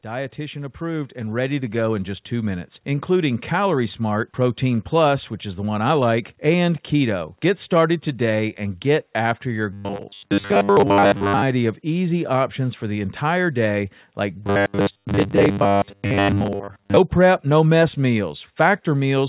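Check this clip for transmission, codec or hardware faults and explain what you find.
There are two faults, both from the transmission chain. The audio has clearly been through a narrowband call path, with nothing above 4 kHz, which is consistent with G.711 A-law at 64 kbps.

Automatic gain rising, from 0.05 to 2.86 s: the level climbs by about 11 dB over nearly three seconds. An automatic gain control judged the input too quiet and kept pushing its gain up. Because it scales everything, the speech and the background noise swell together, so it sounds like someone slowly turning up a fader rather than the talker getting louder.

Robotic sound from repeated short buffers, from 9.73 to 11.42 s and again from 14.44 to 16.97 s: the speech collapses into a stiff, metallic 100 Hz buzz that still roughly tracks the syllables. The likely cause is audio arriving too seldom, so the receiver keeps replaying the last 10 ms chunk to fill the gaps. 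That loop rate sets the fixed 100 Hz pitch, and most of the real audio in those stretches gets skipped.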